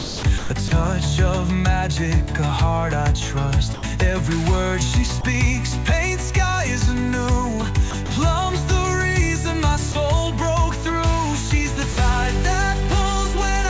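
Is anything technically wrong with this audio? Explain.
Yes. Sound chopped by the voice detector, from 0.00 to 0.71 s and from 7.91 to 8.09 s: the sender's detector likely toggled transmission on and off repeatedly, substituting about 380 ms and then 60 ms of comfort noise, so the sound stutters.

Sound dropped by the voice detector, at 3.74 to 3.83 s, 5.21 to 5.24 s, 9.92 to 9.95 s and 11.93 to 11.96 s: the detector likely mistook quieter sound for background and stopped sending. A 90 ms gap and three 30 ms gaps fill with steady comfort noise before the sound resumes. All of this sits on a call path that cuts off everything above 8 kHz, consistent with G.722 at 64 kbps.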